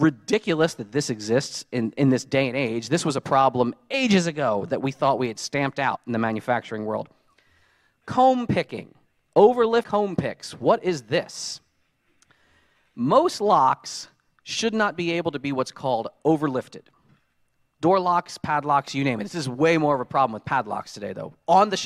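Three times the audio lurches forward: at 3.93 s, from 5.95 to 5.97 s, and at 9.82 s. Roughly 70 ms, 100 ms and about 400 ms of material simply vanish. These are compressed frames skipped. Whole frames were missing or rejected as damaged by the decoder. The jump sizes fit multiples of a 23.2 ms frame.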